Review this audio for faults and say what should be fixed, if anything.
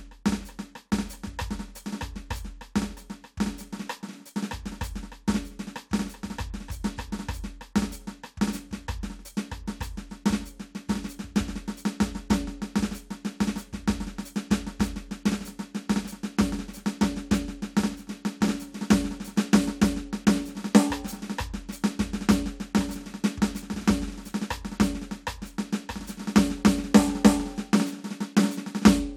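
Nothing in this music needs fixing; no faults found.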